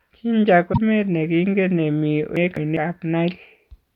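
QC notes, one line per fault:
0.69–0.78 s, damaged data in a compressed stream: corrupted bytes make the decoder lose sync and hunt for a frame header, giving a brief glitch before "ne kingen ne".
2.37–2.77 s, chunks out of order: a 200 ms chunk arrived one chunk late and plays after its successor, so the sound jumbles, with three hard joins.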